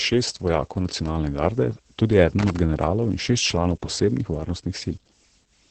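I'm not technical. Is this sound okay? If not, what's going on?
No. Two things have gone wrong. The whole recording has been squeezed hard by Opus voice compression in its speech-only mode, which keeps only a rough model of the voice and throws away everything above about 8 kHz to save space. You can hear it from start to finish: the speech sounds muffled and a bit hoarse, with a faintly robotic, buzzy edge, as if heard through a cheap phone line rather than in the room.

The second problem is brief: loose connector crackle from about 2.39 to 2.57 s. A cable plug or socket with a worn or dirty contact kept losing and regaining connection for a fraction of a second, so the signal was switched off and on very rapidly. That produces a short, rough burst of scratching and crackling, much like the noise from wiggling a faulty headphone lead.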